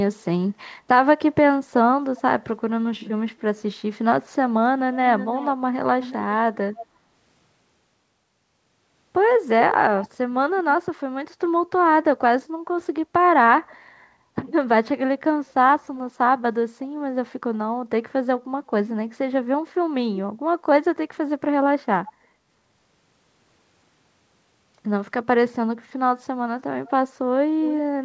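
From 5.18 to 6.14 s the speech is followed by a faint delayed copy of itself, trailing about 350 ms behind and roughly 15 dB down. It is likely an echo leak, where a loudspeaker's output reached the far-end microphone and the echo canceller let some of it through. Shorter scraps recur at 6.75 to 6.86 s, 22.06 to 22.13 s and 26.85 to 26.90 s, at a similar delay and progressively weaker, down to about 25 dB.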